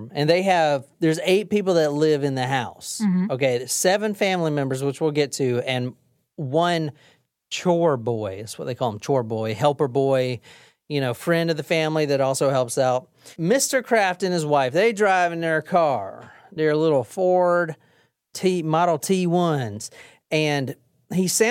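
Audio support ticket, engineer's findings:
Listened through the whole speech recording and found nothing to report, so there's no fault to chase on this one.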